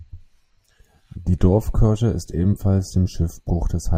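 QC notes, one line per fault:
No faults found on the speech recording.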